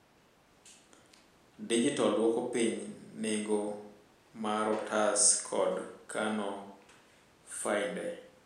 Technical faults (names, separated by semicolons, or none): none